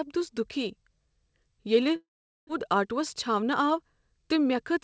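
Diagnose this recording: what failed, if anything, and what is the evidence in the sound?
Network stage: a long network dropout from 1.96 to 2.51 s, likely packet loss. The sound decays into a fading buzz, then about 0.43 s of silence, and 0.4 s never returns. Unlike a short glitch, nothing resumes in place.

Buffer stage: a jitter buffer speed-up from 2.58 to 4.24 s, running about 6% fast to shed roughly a tenth of a second. Pitch stays unchanged, unlike resampling.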